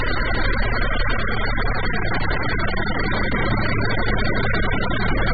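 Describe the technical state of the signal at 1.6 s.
At 1.6 s you're hearing what is likely AAC compression, and it runs through the whole clip. Nothing gets past about 4.7 kHz, so the sound is dull and smeared with a watery, warbling edge. That heavy damage fits a very low bitrate, around 8 kbps.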